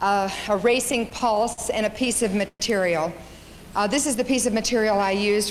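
From 0.85 to 1.60 s and again from 1.96 to 2.62 s, the audio suffers repeated stalls (stutter). Packets arrived late, the jitter buffer kept running dry, and the last sound was held over nine, then six, short waits (longest 51 ms, then 119 ms). Unlike dropouts, nothing is lost; the sound drags and hitches.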